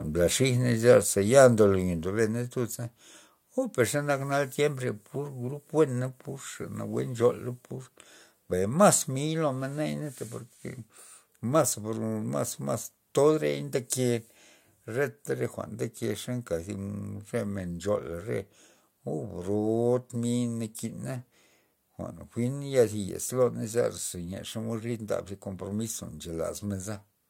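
At 1.02 s the call software likely lowered the microphone's input volume in one step, a microphone volume stepped down by about 2 dB, so the speech and its background sink together abruptly. From 1.40 to 1.46 s the input was likely driven past the converter's limit, a microphone overload of about 1 dB that flattens the tops of a small share of the peaks and gives that stretch a harsh, crackly edge. At 2.04 s another step-down, about 3 dB, again drops the whole level at once.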